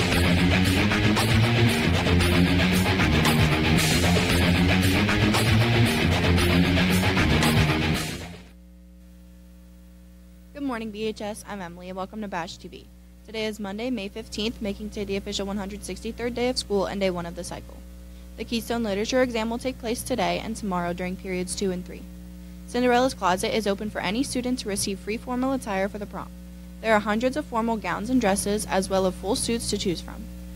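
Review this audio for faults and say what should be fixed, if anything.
Block of digital silence at 29.37 s: a 2.67 ms run of zeros, which fits a 128-sample buffer left unfilled, with abrupt edges heard as a tick. Prevent it by giving the audio thread enough processing headroom to fill every output buffer before its deadline.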